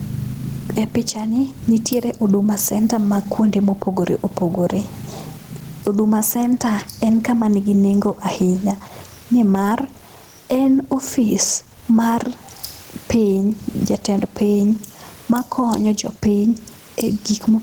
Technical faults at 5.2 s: gain pumping

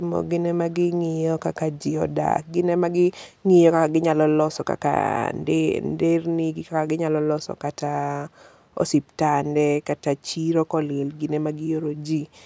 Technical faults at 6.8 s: none

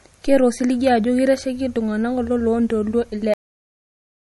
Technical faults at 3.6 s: MP3 compression; cut-off end

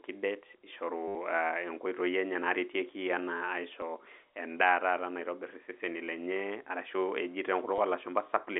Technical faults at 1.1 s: packet loss with last packet repeated

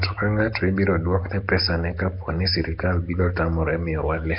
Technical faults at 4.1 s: Nellymoser compression

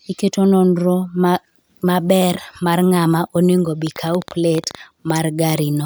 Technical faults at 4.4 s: train of clicks

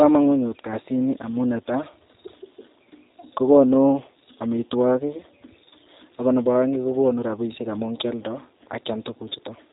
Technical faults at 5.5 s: G.729 codec

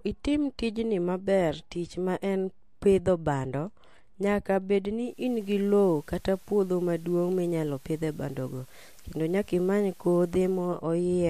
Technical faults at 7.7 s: digital radio blending to analogue

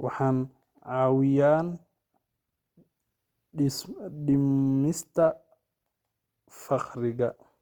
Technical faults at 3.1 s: Opus compression

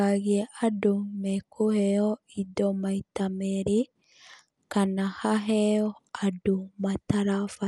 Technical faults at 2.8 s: Dolby Digital compression

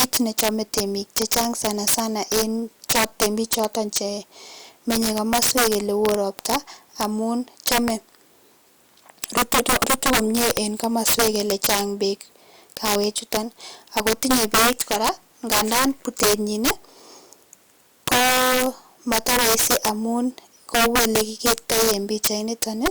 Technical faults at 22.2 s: integer overflow

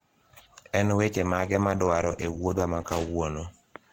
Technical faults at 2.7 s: adaptive stream at a lower bitrate

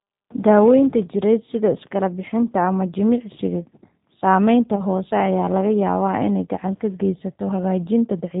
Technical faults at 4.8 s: G.729 codec; VoIP packet loss concealed by the speech codec

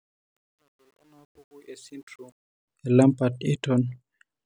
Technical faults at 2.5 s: truncation distortion on a fade

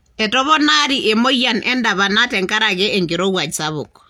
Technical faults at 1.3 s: none

